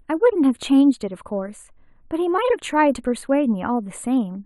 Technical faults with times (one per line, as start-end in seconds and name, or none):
0.00-4.45 channel delay (comb filtering)